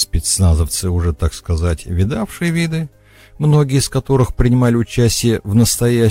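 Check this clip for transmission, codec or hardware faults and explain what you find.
Hard clipping appears twice, from 4.12 to 5.06 s and 5.57 to 5.63 s. Peaks driven about 3 dB and 2 dB past full scale get sliced flat, which looks like squared-off waveform tops, adds crackly distortion, and sprays harmonics upward as vertical smears on a spectrogram.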